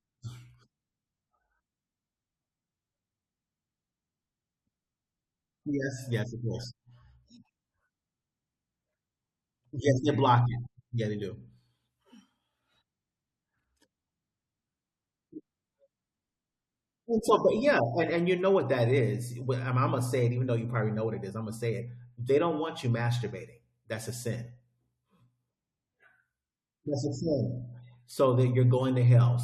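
No technical faults can be heard anywhere in this speech recording.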